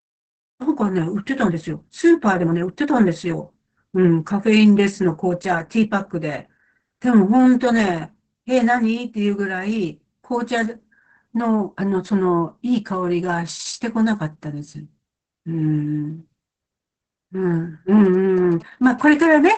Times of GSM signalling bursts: 18.05-19.48

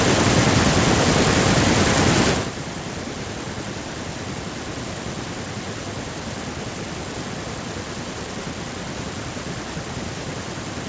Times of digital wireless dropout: none

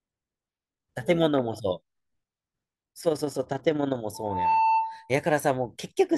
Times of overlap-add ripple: 3.00-3.99

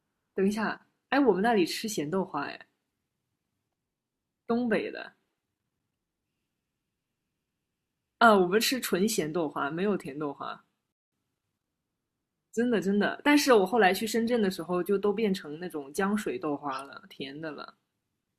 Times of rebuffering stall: 10.92-11.12

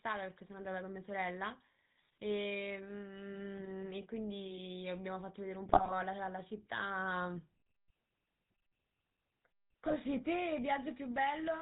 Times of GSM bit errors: 5.66-5.95, 9.84-9.95

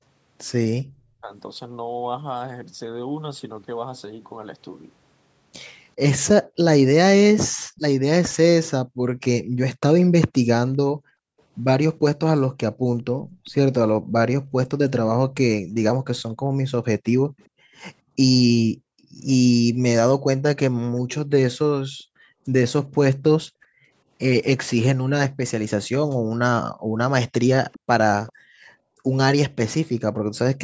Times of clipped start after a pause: none

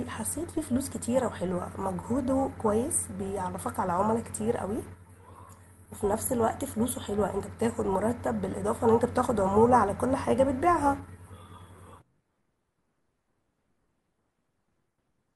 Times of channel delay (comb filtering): none

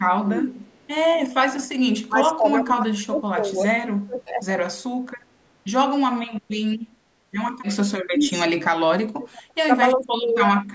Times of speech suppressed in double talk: 0.16-0.49, 2.08-3.68, 4.06-4.49, 8.05-8.62, 9.15-9.70, 9.97-10.58

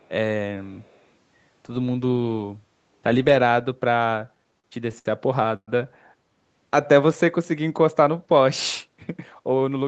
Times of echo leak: 0.00-0.09

